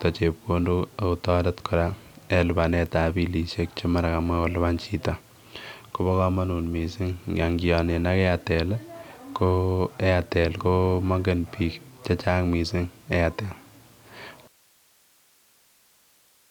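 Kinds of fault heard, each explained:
Audio dropout to a faint residue: at 14.48 s the speech stops abruptly in mid-flow rather than pausing or fading, and it never returns before the clip ends. What fills the gap is steady hiss, roughly 35 dB below the speech level. That points to the path after the break staying live, most likely because the wanted signal was lost upstream while the later gain stages kept passing their own noise.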